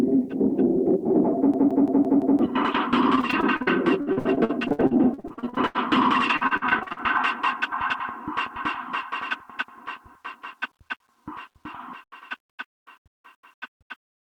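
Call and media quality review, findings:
Grainy, signal-following distortion throughout, noise floor about 50 dB below signal. Likely low bit depth without dither, with undithered rounding that fits about 10 bits, leaving quiet passages gritty.

System hang loop, 1.54–2.39 s. Driver or host froze while the ring buffer kept cycling. A 170.67 ms slice, consistent with an 8192-sample buffer, repeats five times as a 5.86 Hz stutter, with about a second of audio lost.

Repeated packet loss (robotic sound), 3.15–5.77 s and 6.37–7.01 s. Frequent late or lost packets, longest gap 80 ms and 46 ms respectively, patched by extending prior audio. The result is choppy sound with chunks missing.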